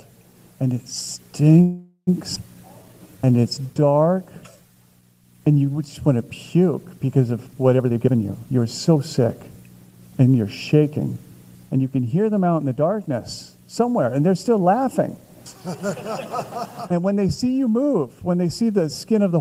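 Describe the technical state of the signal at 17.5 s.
At 17.5 s the signal is intact, with no dropout, distortion, glitch or other audible fault at that point.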